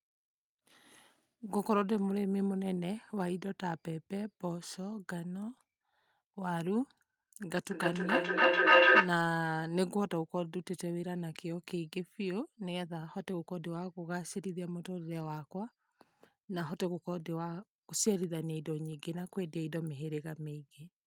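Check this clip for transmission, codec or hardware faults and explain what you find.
One fault here, a short burst of feedback echo between two devices from 7.46 to 9.24 s. Sound leaks from one device's speaker into another device's microphone, cycling back about every third of a second, building to about 12 dB above the speech.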